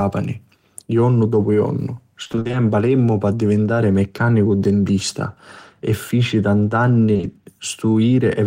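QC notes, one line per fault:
2.23–2.55 s, repeated packet loss (robotic sound): eight gaps of up to 20 ms each leave about half of this third of a second (160 ms) missing, and each one is filled by extending the preceding sound before the next gap arrives. The result is choppy, with pieces missing. On a spectrogram, the harmonics appear as repeated flat-topped, smeared blocks alternating with real detail. The waveform shows periodic copied cycles breaking up the natural envelope.
7.13, 7.17 and 7.21 s, short concealed packet loss: three separate 20 ms holes, spaced 40 ms apart, each patched by continuing the last sound and then crossfading back into the real signal. Each one is heard as a brief smear or wobble across this 0.12 s stretch. On a spectrogram, each patch shows frozen or blurred harmonics or a noise-like wash, and the waveform has a seam at each blend point.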